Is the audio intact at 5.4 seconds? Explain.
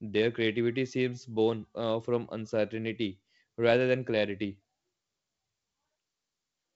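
Yes, the audio is intact at 5.4 seconds, with the G.722 wideband telephone coding doing its normal job and no fault at that point.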